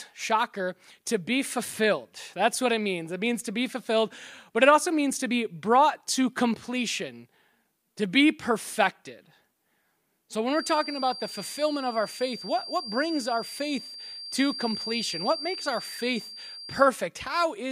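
From about 10.44 s to 16.91 s there's a feedback whistle sitting behind the sound: a thin, steady tone at 4.7 kHz, roughly 15 dB under the main signal, swelling and fading slowly in level as it goes. That's likely a loudspeaker feeding back into the microphone with the loop gain parked just at the edge, so that one frequency keeps ringing on its own but never builds up into a full howl.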